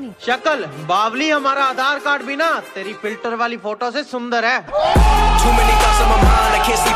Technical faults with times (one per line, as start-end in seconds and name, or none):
none